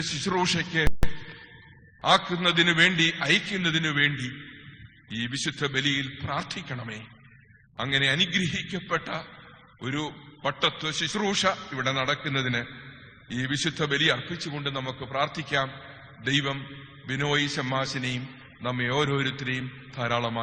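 Just before the one-second mark, at 0.87 s, the audio drops to silence for about 0.16 s and then picks up exactly where it left off at 1.03 s. That's a rebuffering stall. The player ran dry on downloaded data and waited for more, so nothing's missing, but the clip gains about 160 ms of dead air.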